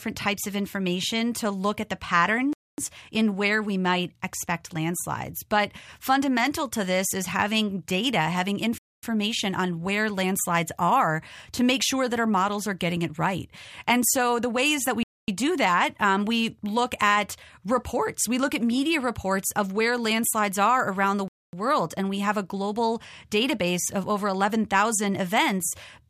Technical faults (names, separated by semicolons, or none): gap between chunks